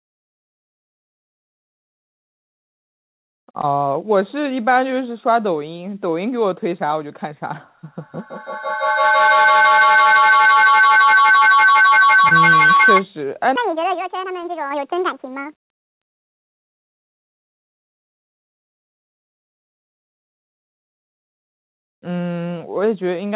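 Speech carries several distinct faults. Between 1.27 and 3.65 s, scattered short gaps leave about seven tiny holes, none longer than roughly 20 ms and around a tenth of a second in all. Each is filled by continuing the preceding sound, so instead of silent dropouts you hear isolated ticks and hiccups spread across the stretch. From 7.85 to 13.08 s a feedback howl builds near 1.5 kHz, peaking about 7 dB above the speech, with repeats roughly every 150 ms. Unlike a steady hum or interference tone, it grows with each trip around a microphone-to-loudspeaker loop and narrows onto one frequency. Inside that howl, at 12.29 to 12.33 s, short concealed packet loss replaces 20 ms of missing audio with a synthesized continuation, heard as a brief smear where real content is actually gone. Shortly after, at 12.77 to 12.81 s, a short stall from a late packet holds the sound for 25 ms until the delayed data arrives. 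Nothing is lost there, so it comes across as a stretched moment rather than a gap. From 13.56 to 15.97 s a section at the wrong speed plays 1.79 times too fast, lifting pitch about 10 semitones together with the tempo, likely from playback against a mismatched clock. That joint shift separates it from pitch correction, which leaves the timing alone.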